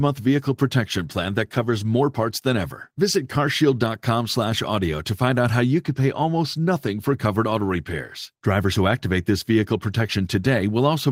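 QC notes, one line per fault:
Nothing stood out on listening.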